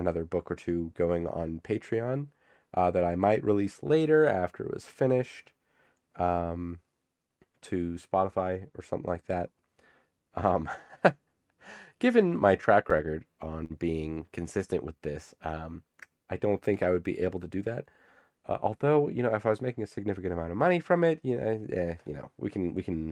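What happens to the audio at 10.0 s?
Nothing goes wrong at 10.0 s: the audio is intact there, with only the steady coding character and upper band limit of the WebRTC call path, which points to Opus at a moderate bitrate with content reaching up to about 12 kHz.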